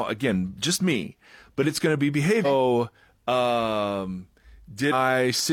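At 2.41 to 2.46 s, just after "it's going to be", there is a brief burst of damaged data in a compressed stream. A stretch of the encoded bytes is wrong. The decoder cannot read those frames properly, loses sync and hunts for the next valid frame header. The result is a short glitch lasting about 50 ms. The same fault returns at 4.89 to 4.93 s as a second glitch of similar length.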